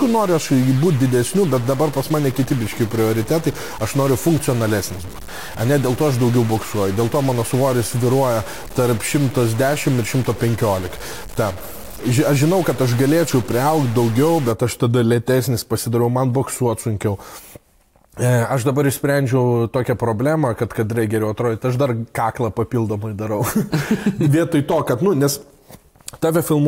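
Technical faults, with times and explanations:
0 to 14.51 s, stuck bit. Harsh, buzzy distortion sits on the sound, and quiet gaps fill with steady noise. This likely comes from one data bit held fixed, throwing about half the samples off by a step near -30 dBFS.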